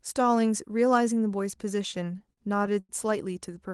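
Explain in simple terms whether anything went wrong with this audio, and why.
Between about 1.91 and 2.91 s the speech drags and stutters. It keeps catching for a split second, ten times in that one second, with the longest hold lasting 90 ms. These are repeated stalls (stutter). The audio came through an Opus call connection, and its packets arrived late or too slowly, so the playback buffer kept running dry. Each time, the receiver stretched out the last bit of sound until more arrived. About a fifth of that stretch is filler, but nothing was actually lost.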